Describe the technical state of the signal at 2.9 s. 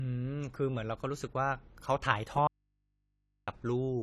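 At 2.9 s the speech signal was most likely lost upstream while the path stayed live. From 2.47 to 3.48 s, an audio dropout to a faint residue leaves only mains hum, roughly 45 dB below the speech. Around that gap, the dull, smeared sound with nothing above 14 kHz points to AAC compression, likely a low-bitrate AAC-LC encode of about 32 kbps, with plainly audible codec damage.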